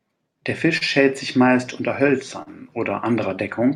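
Clock drift between sender and receiver runs through the whole speech clip. The sending clock is about 3 percent slow against the receiver's, so the jitter buffer steadily drains and the receiver has to pad it by repeating or stretching small pieces of audio. The result is a string of small timing hiccups at irregular spacing, where the rhythm briefly drags or stutters before carrying on.

A short stall from a late packet occurs from 0.77 to 0.83 s, and again from 2.43 to 2.48 s. Each time a packet missed its playout slot, the buffer ran dry, and the receiver held the last sound for about 37 ms and then about 40 ms until the data arrived. Nothing is lost, but a sound hangs slightly too long, with a faint buzz or dip, and the playback delay grows by that amount.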